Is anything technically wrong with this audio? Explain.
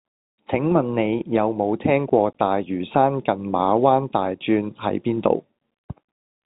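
No, nothing technically wrong can be heard in this speech clip. It has the sound of G.711 telephone coding, with nothing above about 3.8 kHz, which gives the narrow, phone-line character expected of that path.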